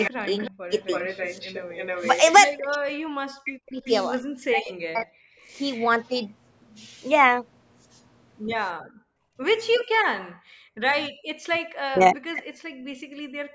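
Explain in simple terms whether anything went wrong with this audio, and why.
A faint, delayed copy of the speech trails behind it from 0.0 to 2.66 s, briefly at 3.85 s, and again from 5.57 to 5.86 s, arriving about a third of a second late. This is an echo leak, likely from a loudspeaker on one end whose echo canceller let some of its own sound get back into the microphone.

The speech dips sharply or drops out in pieces from 0.13 to 0.76 s, from 2.69 to 5.07 s, and from 11.47 to 13.46 s. This is speech suppressed in double talk, likely because both sides spoke at once and the echo canceller turned everything down.

The room sound around the speech briefly drops away from 5.35 to 5.44 s, and drops much more deeply and for longer from 8.74 to 11.19 s. This is background gated by the echo canceller, which pulled the microphone down hard while the loudspeaker was playing.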